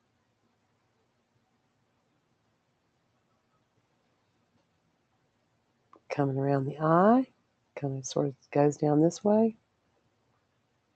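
From start to finish there's a noise suppressor applied to music or sounds, a speech-tuned processor left running on material it wasn't built for. It mistakes sustained tones, room ambience and reverb for noise and pulls them down, so attacks poke through while anything held sinks, with the level swinging by roughly 20 dB. You hear it as pumping and fluttering, with tails thinning out, all on top of a top end that stops near 8 kHz from the call codec.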